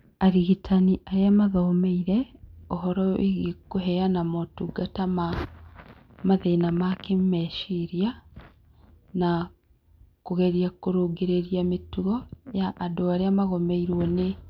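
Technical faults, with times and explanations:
No technical faults can be heard at any point in the speech. There is nothing here that needs a time or an explanation.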